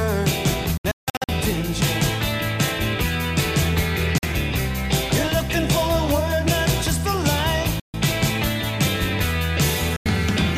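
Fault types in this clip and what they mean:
Bluetooth dropout: the sound cuts to silence in abrupt holes and resumes as if it had kept playing, likely from wireless packets missing their deadline. The worst stretch is 0.77 to 1.29 s, about 370 ms lost in broken gaps; shorter holes follow at 4.18, 7.80 and 9.96 s.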